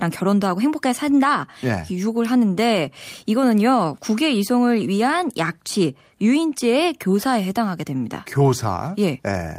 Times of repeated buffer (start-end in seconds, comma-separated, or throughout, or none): none